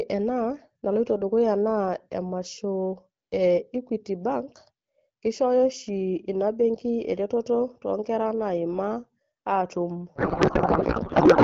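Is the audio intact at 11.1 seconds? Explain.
No. From 10.15 s to the end at 11.44 s there is a codec payload misread: AMR frames packed in octet-aligned mode are being unpacked as bandwidth-efficient, so the decoder takes bits from the wrong positions and builds valid-looking but wrong frames. The clear AMR wideband speech heard before this point is replaced by garbled noise and warbling that barely tracks the talker, and it lasts through 11.1 s to the end.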